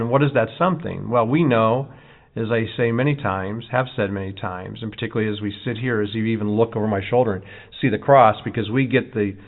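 No technical faults are audible anywhere in the speech.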